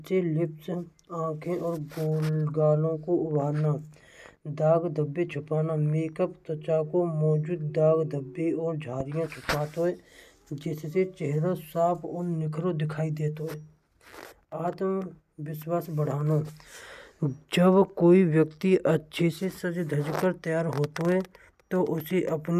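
A loud pop at 9.00 to 9.03 s in this speech recording is a single sharp burst roughly 10 dB above the speech, likely from a sudden voltage spike.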